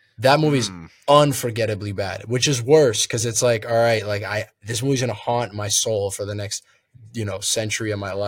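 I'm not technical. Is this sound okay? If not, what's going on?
Yes, this sound is okay; there's nothing going on with it that needs fixing.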